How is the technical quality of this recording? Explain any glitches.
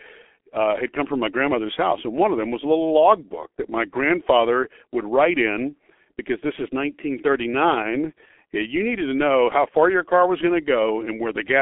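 Quality's pretty rough: the whole thing carries heavy G.723.1 codec damage. Nothing comes through above 3.8 kHz, its slow-updating 30 ms frames, fitting a roughly 6 kbit/s stream, leave speech muffled, hoarse, with smeared consonants.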